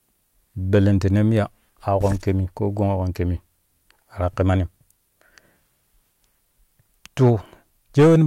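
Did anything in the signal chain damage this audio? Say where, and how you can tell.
Yes. Hard clipping at a converter or format stage: peaks are cut flat at 7.22–7.30 s (about 2 dB over) and harsh fuzz at 7.99–8.22 s (about 8 dB). Unlike soft saturation, the tops are squared off.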